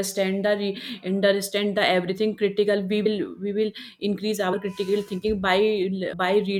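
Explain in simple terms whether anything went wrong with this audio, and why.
Something did go wrong. The speech jumps forward three times, a fault called compressed frames skipped. The audio is stored in small chunks, and a few chunks were lost or rejected as damaged, so they never play. Right after "critical we", at 3.05 s, about 70 ms of speech vanishes. More gaps follow at 4.52 s, about 40 ms, and at 6.12 s, about 100 ms.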